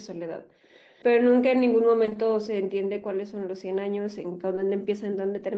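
From 0.63 to 1.03 s a very faint delayed copy of the speech trails about 0.26 s behind, far quieter than the voice. This is echo leak, likely from a loudspeaker whose echo canceller let some pickup return. Between 2.05 and 2.17 s, and again at 4.55 to 4.59 s, the sound briefly smears and wobbles: short concealed packet loss, where missing audio was filled by extending the previous sound.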